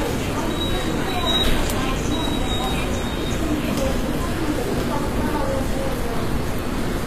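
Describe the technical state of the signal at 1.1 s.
At 1.1 s, as throughout, the treble sounds gritty and metallic with nothing above 14.9 kHz, likely HE-AAC compression at a low bitrate around 24 kbps, rebuilding highs from copied lower bands.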